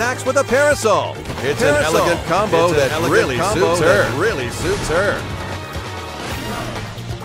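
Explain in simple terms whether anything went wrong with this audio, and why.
From 1.55 to 5.57 seconds, everything is heard twice: a quieter, identical copy trails about a second behind, starting and stopping abruptly. This is a doubled audio track, likely caused by the sound being picked up a second time through a slower route.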